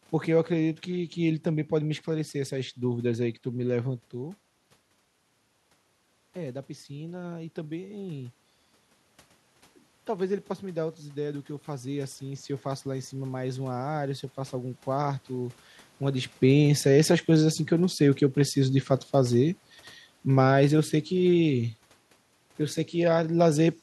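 From 6.34 to 8.39 s, after the input dropped about 10 dB, and again from 10.07 to 14.81 s, automatic gain rising lifts the level about 4 dB; room noise swells with the voice, unlike a talker moving closer.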